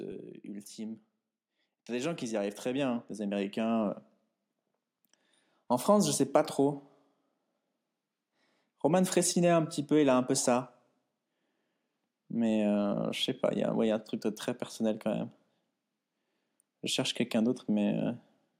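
From about 0.76 s through 18.05 s the whole recording slowly swells, the speaking level and the room background climbing together until everything sits about 14 dB louder than at the start. This is automatic gain rising: the automatic gain control judged the incoming signal too quiet and kept nudging its amplification upward over those seventeen-odd seconds. Because it scales the entire input, noise and voice grow in lockstep rather than the voice alone.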